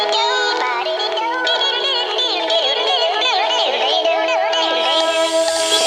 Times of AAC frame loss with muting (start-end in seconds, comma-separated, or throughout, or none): none